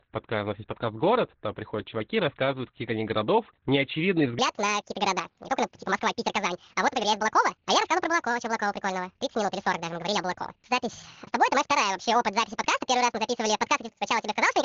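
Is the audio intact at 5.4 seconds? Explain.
No. From 4.39 s to the end, this section plays at the wrong speed, about 1.71 times too fast, so the speech comes out hurried and pitched up roughly ten semitones. That's likely a player or editor running it on the wrong clock.

On top of that, the whole clip carries heavy Opus voice compression. The band is squeezed to narrowband, about 4 kHz, and the excitation is coded coarsely, so at 5.4 s the speech also sounds muffled, hoarse and a bit robotic, which fits SILK at around 8 kbps.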